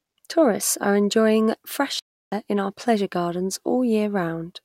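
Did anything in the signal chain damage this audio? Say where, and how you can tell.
Yes: a playback stall from 1.99 s to 2.32 s. The speech cuts off mid-flow and the output falls completely silent for about 0.33 s before the sound returns. A dropout that clean and that long points to the playback stage rather than the recording: the player likely ran short of buffered data, or its audio thread was held up, so nothing reached the output until it caught up again.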